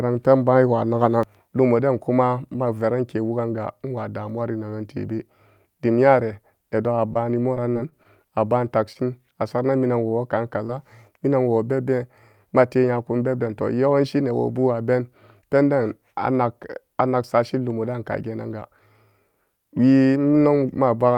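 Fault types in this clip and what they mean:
Repeated packet loss (robotic sound): from 7.13 to 8.07 s, just before "a baan", seven gaps arrive in quick succession, the longest 25 ms. Each is patched by extending the preceding sound, so about 60 ms of real audio goes missing and the stretch turns choppy.
Short stall from a late packet: at 8.93 to 8.97 s, right after "a baan", and again at 10.09 to 10.13 s, a packet arrives late and the buffer runs dry. The last sound is held for about 21 ms and 18 ms, then resumes with nothing lost, leaving a drawn-out sound with a slight buzz or dip.
Short concealed packet loss: at 10.67 to 10.70 s, roughly 20 ms of audio fails to reach the decoder. The receiver bridges the hole by continuing the previous sound for about 18 ms before blending back, heard as a small smear or wobble.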